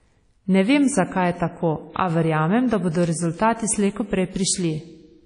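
WMA compression, throughout this speech clip, leaves ringing, washy quantisation noise smeared across long transform blocks and nothing above 10.1 kHz, likely from an encode around 32 kbps.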